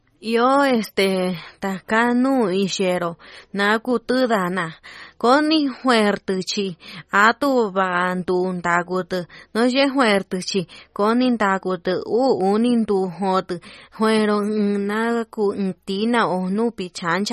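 From start to finish the speech has a watery, swirly quality, and nothing survives above 15.1 kHz. That's likely MP3 compression at a low bitrate, something like 32 kbps, with weak frequency lines dropping in and out between frames and the treble sliced off flat.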